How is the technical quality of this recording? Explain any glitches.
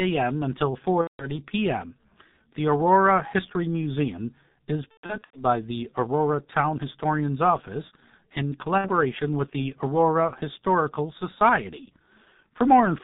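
The recording has poor technical quality: heavy low-bitrate codec damage runs throughout, and three dropouts disturb the speech.

G.723.1 codec, throughout: the speech passes through a very coarse telephony codec, which fits G.723.1 at 6.3 kbit/s. It cuts everything above 4 kHz and models the voice in slow 30 ms steps, so the speech sounds muffled and hoarse, with smeared consonants.

VoIP packet loss concealed by the speech codec, at 1.01–1.29 s, 4.92–5.39 s and 8.78–8.90 s: the decoder fills missing stretches by repeating its last pitch and filter at falling gain. About 180 ms is lost in the first gap and 60 ms in the third, each heard as stretched sound that fades. In the middle event, losses totalling about 270 ms are scattered over 420 ms, the longest run being 120 ms. The speech there sounds intermittently stretched and weak, and it stays distorted briefly after each gap.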